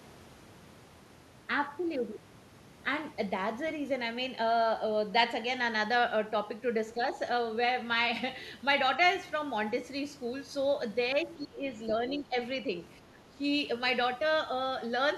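From 11.36 to 11.66 s, 12.1 to 12.36 s and 13.01 to 13.43 s the speech sinks sharply, the second dip shallower, likely speech suppressed in double talk as an echo canceller ducks overlapping audio. Waveform and spectrogram show brief hollow notches.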